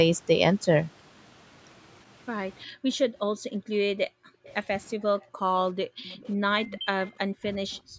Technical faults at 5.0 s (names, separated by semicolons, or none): background gated by the echo canceller